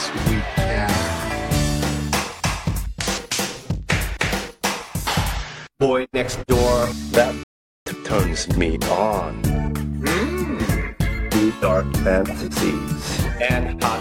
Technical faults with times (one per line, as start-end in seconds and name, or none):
7.43-7.86 rebuffering stall